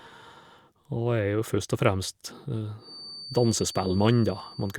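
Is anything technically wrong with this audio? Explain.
Yes. From 2.76 s to the end of the speech at 4.78 s, a feedback whistle sits at 4.6 kHz, roughly 20 dB below the speech. It is likely a loudspeaker-to-microphone loop held just at the point of feedback. Unlike full howling, it stays a thin tone at one pitch that swells and fades slowly, and never builds.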